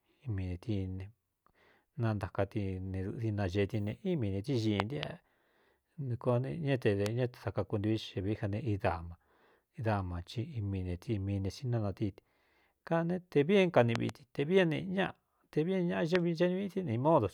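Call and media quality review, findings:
Loud pop: likely voltage transient (plug, switch, static or driver glitch) added to signal path. Sharp pops over continuing speech, about 20 to 25 dB above it: double at 4.80–5.05 s and 13.96–14.11 s, single at 7.06–7.08 s and 16.15–16.17 s.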